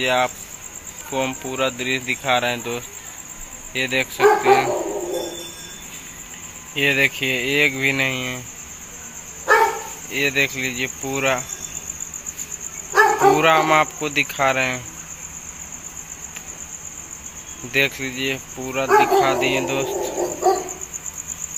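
No technical faults can be heard anywhere in this recording.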